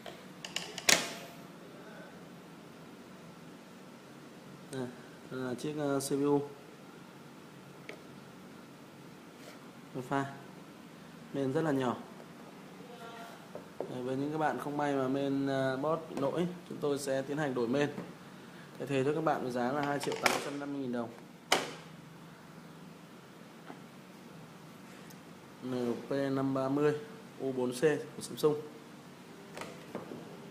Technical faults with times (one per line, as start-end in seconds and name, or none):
none